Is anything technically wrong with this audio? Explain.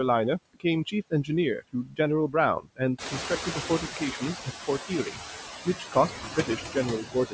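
Yes. Throughout the clip there are noise suppressor artifacts: the background is pulled down by about 9 dB, but unevenly, frame by frame. It dips in the gaps and swells back under the speech, and the leftover noise has a fluttering, warbling texture. This comes from the suppressor estimating steady noise per frequency band and attenuating each band separately. Unlike plain gating, it doesn't cut everything at once; individual bands come and go, which gives the residue its watery movement.

Speech cut by the noise suppressor happens at 1.61–1.99 s (deepest drop about 18 dB), 2.6–2.81 s (about 16 dB), 2.99–3.83 s (about 11 dB), 4.88–5.2 s (about 11 dB), 5.65–6.76 s (about 14 dB) and 7.01–7.33 s (about 16 dB). Each stretch loses only a fraction of a second of actual signal, roughly 0.4 s in the longest. Here the suppressor mistook soft speech energy for noise, so parts of the speech sound swallowed. 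These drops follow the speech, which tells them apart from the steady flutter in the background.

The room noise jumps by about 16 dB at around 3 s, and the noise suppressor catching up follows from 2.98 to 4.34 s. For about 1.4 s the louder noise comes through with less reduction, only about 7 dB, and then it settles as the noise estimate adapts. The slow downward slide after a sudden rise marks this as estimator lag, not a change in the room itself. The call microphone's band limit, with nothing above 8 kHz, is expected for this path.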